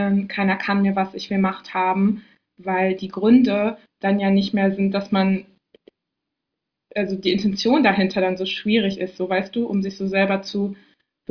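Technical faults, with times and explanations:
No technical faults detected.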